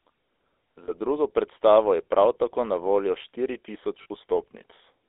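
The whole recording passed through the GSM full-rate codec, which rebuilds the voice from a vocal-tract model driven by sparse, regular pulses at a rate that fits 13 kbps, inside a line band of roughly 300 Hz to 3.6 kHz. The speech sounds plainly buzzy and gravelly, thin at both ends.

Lost GSM frames occur from 0.84 to 0.91 s, just before "drugo predstavo je prav", and from 4.02 to 4.06 s, right after "na voljo štiri". Each gap is about 40 ms, which fits two dropped 20 ms frames. The decoder repeats the last good frame, so the sound briefly freezes into a rough, metallic ring.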